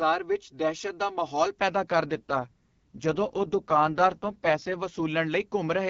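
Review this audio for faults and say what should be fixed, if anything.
Channel delay (comb filtering) runs from 0 to 1.57 s. One channel lags by about 3 ms, so the mono sum cancels at evenly spaced frequencies starting near 200 Hz, making the speech hollow and phasey. Time-align both channels before any mono fold-down.

An AMR rate drop runs from 2.03 to 5.06 s. The AMR-WB coding falls from 12.65 to 6.6 kbit/s, and speech turns rough and synthetic with no gap or bandwidth change before recovering. Improve radio link quality so the network has no reason to lower the codec rate.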